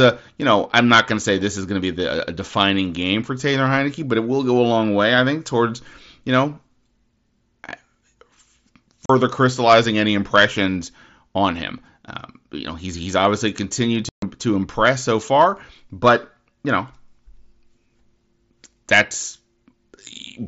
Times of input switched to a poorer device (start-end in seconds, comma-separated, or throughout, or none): none